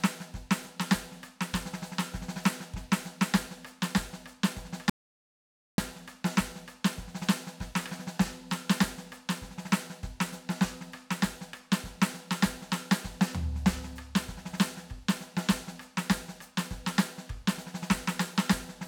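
At 4.90 s the music drops straight to silence, an audio dropout to silence, and comes back mid-flow at 5.78 s. That's nearly 0.9 s gone with no room tone underneath, likely the input cutting out while the recorder kept writing silence.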